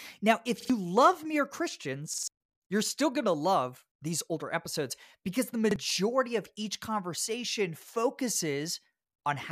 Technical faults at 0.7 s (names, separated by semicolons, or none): repeated buffer